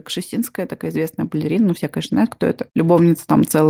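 Automatic gain rising from 0.29 s to the end of this speech recording: the gain control, treating the input as too quiet, keeps lifting level, so voice and background swell together.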